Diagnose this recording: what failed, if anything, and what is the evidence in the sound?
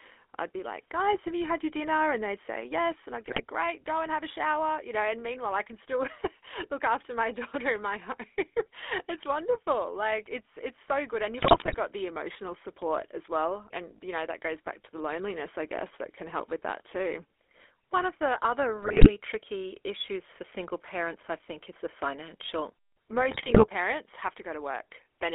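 The codec stage is the culprit throughout. The speech has the buzzy, gravelly roughness of a GSM full-rate codec and nothing much outside 300 Hz to 3.5 kHz. That fits a 13 kbps full-rate stream rebuilding the voice from a vocal-tract model driven by sparse pulses.

On top of that there are GSM bit errors from a weak radio link, where corrupted filter, pitch or gain values reach the decoder. You hear squawks and gargling at 3.26–3.41 s, just before "great go and have", and again at 11.38–11.75 s ahead of "the emotional". Another burst lands at 18.82–19.10 s between "of the other" and "tricky issues for single", and the last at 23.30–23.67 s.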